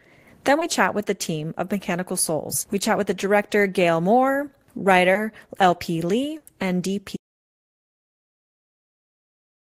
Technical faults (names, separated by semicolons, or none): short concealed packet loss; burst of packet loss; audio dropout to silence